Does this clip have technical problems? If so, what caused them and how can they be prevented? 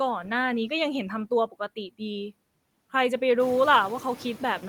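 Yes. Noise suppressor artifacts run through the whole clip. The suppressor cuts bands it judges to be steady noise by about 18 dB, frame by frame. So the background drops in the gaps and swells back under the speech. The room noise steps up by about 11 dB around three and a half seconds. To prevent it, lower the suppression depth or quiet the room at the source.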